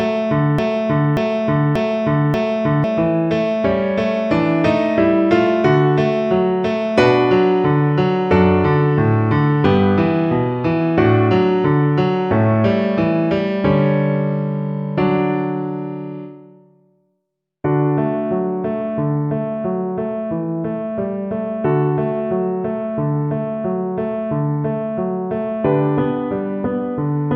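A likely stall in the player or stream causes a broken-record loop, already running at the start until 2.84 s: one 585 ms fragment repeats four times, replacing the audio.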